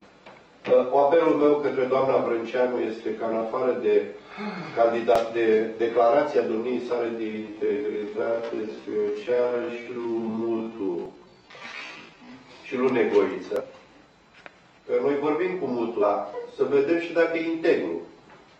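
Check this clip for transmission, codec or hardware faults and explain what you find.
Two kinds of fault are present. From 7.09 to 12.32 s there is a time-stretched section, likely from software slowing the audio to about 0.57 times speed while keeping pitch, which makes the pace drag. At 11.06 to 11.12 s, 13.56 to 13.62 s and 15.98 to 16.04 s, damaged data in the compressed stream throws the decoder out of sync, producing brief glitches.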